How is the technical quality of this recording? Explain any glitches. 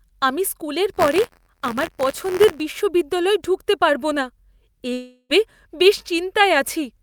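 The recording has two glitches.

From 0.93 to 2.61 s, between "আমি স্কুলের" and "বিশ্ববিদ্যালয়ে ঢুকতে পারব না", the speech carries a robotic 86.1 Hz rattle. This is buffer tearing: writer and reader cross each period, splicing in a small sliver of audio from about 20 ms earlier, which fits a 512-sample buffer.

From 4.93 to 5.31 s, the speech turns into a fading buzz for about 0.36 s, then a brief silence, and resumes with that stretch missing. The likely cause is a long network dropout, with the receiver stretching out the last sound it had.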